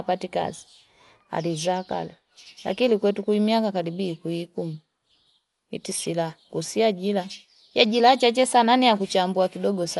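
Throughout, the speech sounds dull, with nothing above 11.4 kHz and a rough, fluttering noise around tones, likely Dolby Digital compression at a starved rate near 64 kbps, rather than a clean low-pass filter.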